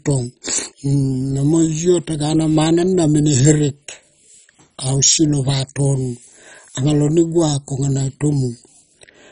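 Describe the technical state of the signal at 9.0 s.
At 9.0 s the speech carries the same heavy MP2 compression damage as the rest of the clip, likely from a very low Layer II bitrate near 32 kbps. Upper sub-bands are switched off above 10.4 kHz, giving dull, gurgling, granular distortion.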